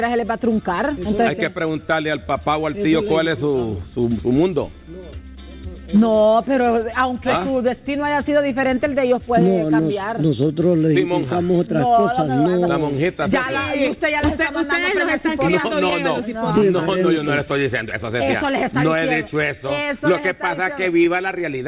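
Clock drift between sender and receiver runs throughout: the sending clock is about 2 percent slower than the receiving one, so the jitter buffer keeps draining. The receiver must stretch the audio, which gives a faintly unsteady, dragging pulse rather than any single obvious break.

Repeated timing corrections follow from that drift from 0.25 s to 21.06 s. The receiver repeats small slices to play at 98 percent speed, adding roughly 0.4 s in total. The edits all go the same way but land unevenly, heard as occasional slight hiccups.

Scattered short gaps appear from 5.75 s to 7.83 s: about three brief losses, each patched by extending the preceding sound, the longest only a few milliseconds. They come through as tiny ticks or smears against the band-limited call audio, which has nothing above 4 kHz, consistent with G.711 mu-law at 64 kbps.

Scattered short gaps recur from 13.87 s to 15.94 s: again about three small holes, the longest around 10 ms, each concealed by continuing the last sound. 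Together they cover only a sliver of the stretch and are heard as brief, isolated blips.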